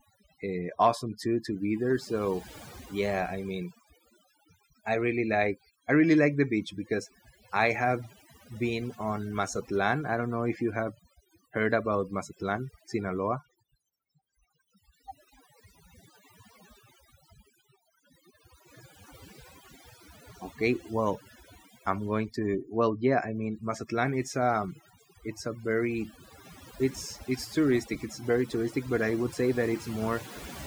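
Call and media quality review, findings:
Overdone noise removal, throughout. Background gated to near silence with twinkling specks. Probable component: noise suppressor set too aggressive. Bands near its noise estimate pulled far down or off per frame, taking quieter speech detail with them. Isolated surviving bins produce the specks.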